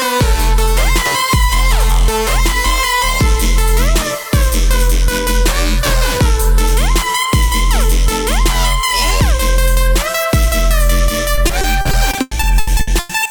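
Repeated packet loss (robotic sound) from 11.35 to 13.27 s: gaps up to 100 ms are patched by stretching the preceding sound, leaving it choppy and robotic.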